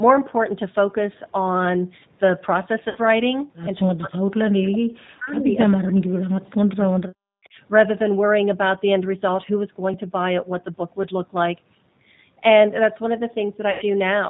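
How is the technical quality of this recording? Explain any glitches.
The recording has clear technical faults. Codec damage runs through all of it, and several brief glitches and dropouts are audible.

G.729 codec: For the whole clip, the speech passes through this 8 kbit/s VoIP codec. It rebuilds the signal from a vocal tract model, a pitch predictor and a few pulses per frame. Nothing above 4 kHz survives. The speech sounds plainly rough, muffled and somewhat synthetic.

VoIP packet loss concealed by the speech codec: At 2.89 to 2.98 s, about 60 ms of audio goes missing. At 13.71 to 13.85 s, about 100 ms goes missing. Each time the decoder stretches its last pitch and filter state and fades it down. The gaps become a short stretched sound that fades.

Speech suppressed in double talk: From 3.93 to 7.57 s, the speech dips by as much as about 40 dB. In total the dips last roughly three seconds. 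This is likely an echo canceller turning the talker down while the far side spoke at the same time.

Echo leak: At 7.44 to 7.49 s, a faint delayed copy of the speech appears. It is about 40 dB below the speech and trails by 318 ms. It is likely loudspeaker sound that an echo canceller failed to remove and sent back.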